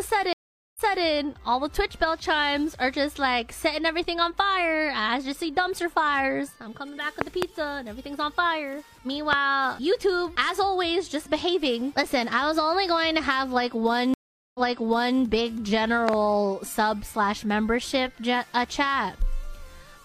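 Stream reconnect at 0.33 to 1.04 s and again at 14.14 to 15.20 s: the connection dropped, the player fell silent for 435 ms and then 408 ms, and a fresh decoder picked up mid-stream from a resent burst, so the audio resumes 279 ms and 650 ms earlier, repeating a stretch already heard, with the first moments muted or fading in.

Loud pop at 7.21 to 7.44 s (two pops), 9.33 s (one) and 16.09 to 16.16 s (two): a sudden voltage step or pulse, likely from a plug, switch, static or driver glitch, lands on the signal at about 20 dB above it, heard as sharp pops while the sound continues beneath.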